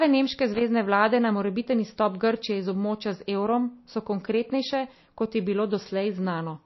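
From the start the speech sounds watery and swirly, with nothing above about 5.8 kHz, so it's dull and the s sounds go metallic. That's likely MP3 compression starved of bits, which fits a bitrate somewhere near 27 kbps, forcing the encoder to chop the treble and drop weak detail.

Then from 0.54 to 0.61 s there's a short, irregular burst of scratchy crackle just before "vlade na morebiten izstop". That's loose connector crackle: a worn or dirty contact briefly making and breaking, chopping the signal.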